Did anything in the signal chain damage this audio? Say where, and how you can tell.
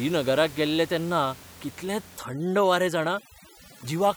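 Yes, overdone noise removal in the call processing stage, from 2.17 s to the end. The room noise, about 21 dB below the speech, drops and breaks up into twinkling specks as bands are gated off. This differs from codec smearing, which keeps the background.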